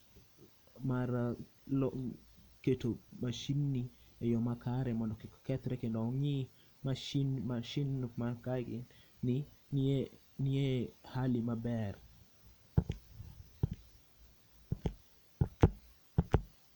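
No technical faults can be heard anywhere in the speech.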